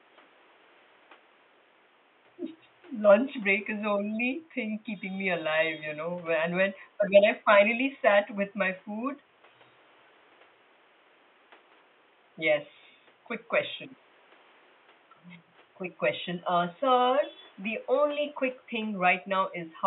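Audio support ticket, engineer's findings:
No faults found; nothing to action.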